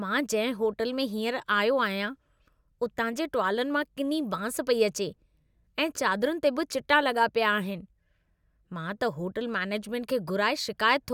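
No technical faults can be heard anywhere in the recording, and the speech signal stays intact and continuous throughout.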